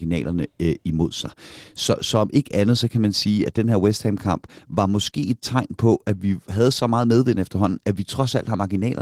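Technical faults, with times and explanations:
Throughout: Opus voice compression. The speech sounds hoarse and slightly robotic. Its low band is coded by linear prediction with a coarse excitation, and a thin transform layer carries content above 8 kHz. The damage is plainly audible, which fits a bitrate near 16 kbps.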